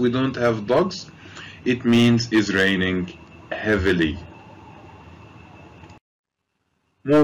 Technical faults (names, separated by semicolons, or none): hard clipping